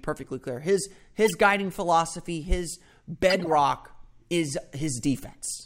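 At 1.25 to 1.35 s, just before "guiding philosophy his", and again at 3.30 to 3.48 s, just after "guiding philosophy his", there is a corrupt frame decoded fault. Damaged compressed frames were played anyway, so misread gains and codes put energy at the wrong frequencies. Each event is a short chirpy burst, peaking around -15 dBFS and then around -10 dBFS. Their lengths suggest a handful of consecutive bad frames. A spectrogram shows blocky, misplaced patches with sharp edges, and the waveform shows an abrupt bump.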